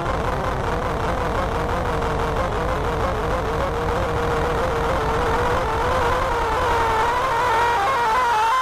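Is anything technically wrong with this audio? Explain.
No, nothing in this audio points to a technical fault.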